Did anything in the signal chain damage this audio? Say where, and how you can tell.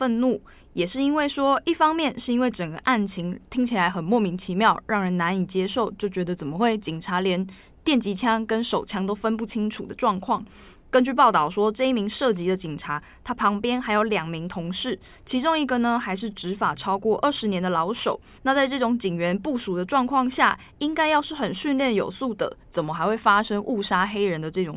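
No, nothing in the signal chain damaged this audio, and there is no point where any damage can be heard.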